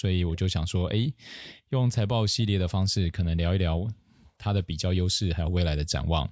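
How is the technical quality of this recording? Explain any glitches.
The recording has two call-processing problems: the room background keeps getting ducked, and there's one brief ghost of an echo.

Background gated by the echo canceller: at 0.0–0.28, 0.82–1.24, 1.55–2.22, 2.79–2.92, 3.5–5.5 and 6.0–6.12 s, the canceller clamps the mic by about 40 dB, so the room tone drops out and then pops back.

At 1.43–1.55 s there's a faint, very quiet repeat of the voice trailing about 0.32 s behind, likely an echo leak where the canceller let some loudspeaker pickup slip back through.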